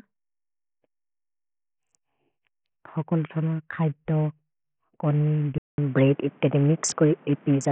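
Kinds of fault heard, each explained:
Bluetooth SBC compression: The speech was likely carried over a Bluetooth link whose SBC encoder had a small bit pool, which fits a rate near 48 kbps. Coarse sub-band quantisation leaves heavy grit and aliasing throughout, and nothing survives above 17 kHz.
input switched to a poorer device: At 5.58 s the recording likely changed to a weaker microphone or headset call profile. After 200 ms of silence, the speech returns dull and narrow, with nothing above 7.6 kHz, a level shift of about 5 dB, and new noise about 30 dB down.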